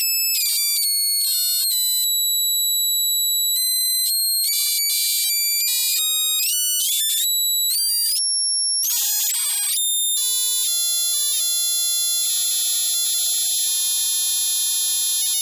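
No technical fault can be heard anywhere in this recording of sounds.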